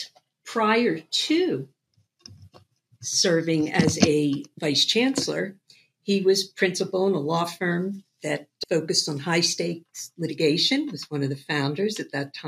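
At 10.99 s there's a block of digital silence, and it's tiny, only about 0.31 ms of zeros. For a moment the output just stops getting real samples, probably because the buffer wasn't filled in time or a calculation produced invalid values. The sound cuts out and comes straight back with no fade. At that length there's no hole you could hear, just a tick or dip where the two hard edges sit almost on top of each other.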